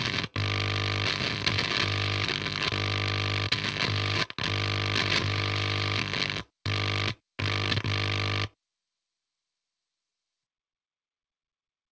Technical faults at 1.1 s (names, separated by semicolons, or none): none